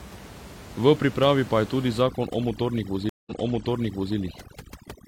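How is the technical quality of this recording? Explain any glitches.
The recording has two glitches from about 2 s onward, both in the processing and delivery chain rather than in the room.

From 2.01 s to the end, overdone noise removal suppresses frequency bands near its noise estimate, so the room background, about 18 dB below the speech, collapses into twinkling near-silence.

At 3.09 s a stream reconnect occurs. The connection drops and a fresh decoder starts mid-stream, leaving 171 ms of silence, after which the audio repeats from about 0.9 s earlier and settles by 4.16 s.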